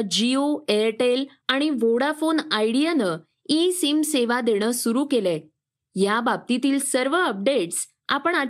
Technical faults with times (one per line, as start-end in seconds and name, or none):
0.17-8.48 clock slip clicks